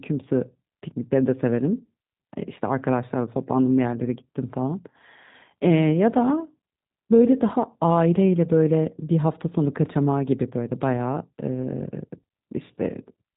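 Speech that sounds rough, slightly synthetic and muffled throughout, with nothing above 3.8 kHz, the plainly audible damage of the G.729 codec's low-rate model-based reconstruction, which fits 8 kbit/s.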